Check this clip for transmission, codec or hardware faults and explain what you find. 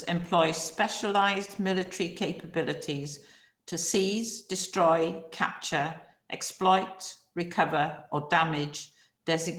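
One codec fault runs through the whole speech clip: Opus voice compression. The encoder is short of bits from start to finish, which fits a bitrate of around 16 kbps. It splits the speech between a linear-prediction coder below 8 kHz and a transform layer above, with the linear-prediction coder coding the excitation coarsely. The result is plainly audible: the speech sounds hoarse and slightly robotic.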